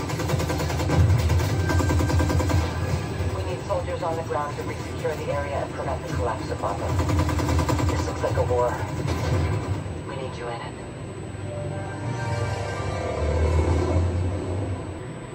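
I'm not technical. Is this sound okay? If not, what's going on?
No. A faint, thin, high-pitched whine at 8 kHz runs under the sound from start to finish. This is USB whine: the USB connection draws power in tiny bursts eight thousand times a second, and that rhythm leaks into the audio through shared power or ground wiring.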